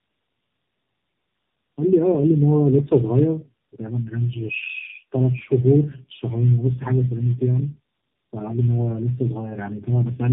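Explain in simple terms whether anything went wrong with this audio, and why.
Something did go wrong here, and it lasts the whole way through. The speech has been through tandem speech coding: the call passed over several links, each with its own speech codec, so the voice was squeezed, unpacked and squeezed again three times in a row. Each pass worked on the previous one's damage, so it stacks up into that rough, muffled, warbly sound. There's also nothing above about 3.7 kHz, which is why it sounds so boxed-in.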